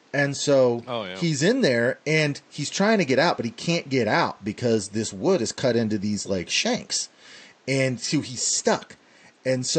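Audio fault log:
Nothing stood out on listening to this speech recording; the only thing heard besides the speech was faint room noise sitting about 35 dB below it.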